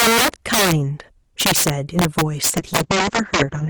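A speech clip with two faults. Integer overflow runs throughout. Loud peaks, driven about 14 dB past the limit, wrap to the opposite sign. A small share of samples do this, giving violent cracks sharper than clipping. A call bitrate drop begins at 2.52 s and lasts to the end. The top end falls from 20 kHz to 8 kHz. The speech turns rough and muffled, which fits the encoder being cut from about 32 to 8 kbps.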